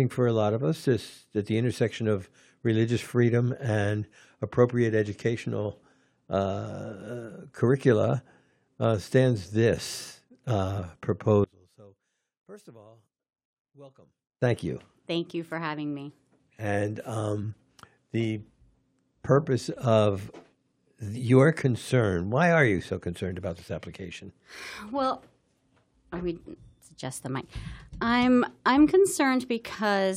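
From 11.44 to 14.42 s the fault is most likely one channel inverted: one side of the stereo pair had its polarity flipped, so when the two channels were combined to mono, everything they shared cancelled out. Because the speech sits in both channels, it drops by about 30 dB for those three seconds, collapsing into a faint remnant made only of whatever differed between left and right, before returning at full level.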